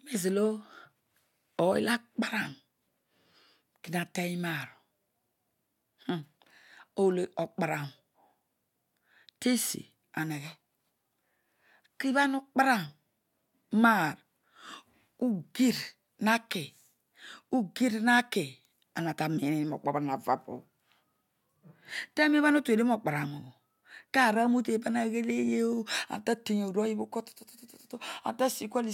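No technical faults are audible anywhere in this speech recording.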